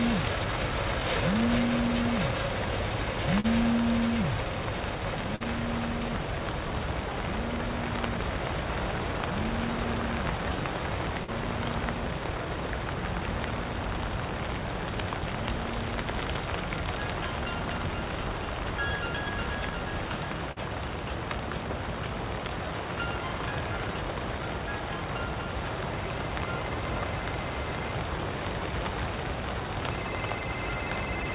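At 3.40, 5.36 and 11.24 s, short concealed packet loss leaves about 40 ms of the call undelivered each time. The receiver papers over each hole by extending the preceding sound for roughly 35 to 45 ms before blending back, so each spot is a brief smear or wobble.

At 20.52 s, a burst of packet loss drops about 40 ms of audio. The receiver extends the last sound for about 46 ms while fading it down, producing a short held buzz or dying hiss before the audio picks up further on. Throughout, the call path's narrowband codec leaves nothing above 4 kHz, which fits G.711 telephone coding.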